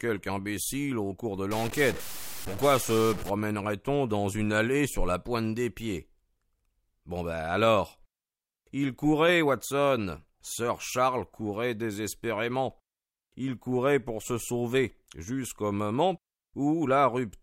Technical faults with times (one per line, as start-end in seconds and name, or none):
1.51-3.30 stuck bit